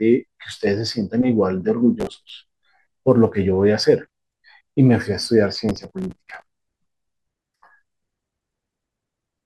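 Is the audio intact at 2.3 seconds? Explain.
No. At 2.3 seconds the clip is just leaving a burst of processor overload crackle that runs from 2.00 to 2.30 s. The processor misses about ten buffer deadlines of roughly 5 ms each. Each miss repeats a scrap of old audio with hard edges, giving a gritty tearing over the speech.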